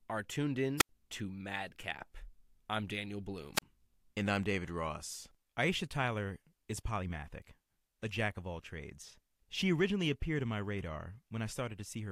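Twice in this speech clip the wireless microphone squelch dropout cuts in, first from 0.78 to 0.89 s and again from 3.54 to 3.62 s. The radio link fades far enough that the receiver's squelch shuts the output off. You get a short burst of hiss, then a hole of near silence, about 82 ms the first time and 35 ms the second, before the voice comes back.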